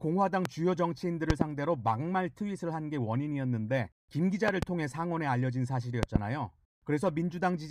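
At 0.45 to 0.48 s a single loud pop sits on top of the speech, followed by double pops at 1.30 to 1.44 s, 4.48 to 4.65 s and 6.03 to 6.18 s, each peaking about 20 dB above the signal while the speech carries on underneath. A sudden voltage step, likely from a plug, switch or static discharge, is the cause. On the waveform each pop is a tall spike; on the spectrogram, a thin full-height vertical stripe.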